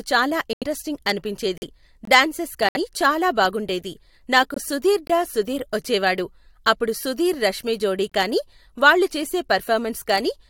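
At 0.53 s the speech drops out abruptly until 0.64 s. This is a corrupt frame muted. Damaged compressed frames were rejected by the decoder, and the player filled them with silence. The hole's length fits a run of about four frames. The next one is shorter, from 1.58 s to 1.63 s, about two frames' worth. Timing holds, so the speech resumes on schedule.

At 2.05 s there is a brief hole of about 21 ms. This is a gap between chunks. The audio arrives in 3-second pieces, and silence sits at each join. Nothing is lost. The flow is only interrupted.

Another corrupt frame muted follows, from 2.69 s to 2.77 s, roughly three frames. A single-frame dropout comes at 4.54 s, lasting until 4.58 s. It starts abruptly.

The chunk gap returns at 5.07 s and 8.10 s. Each is the same 21 ms silence, about 3 seconds after the last. That regular spacing marks the joins between chunks. It separates these from the irregular frame losses.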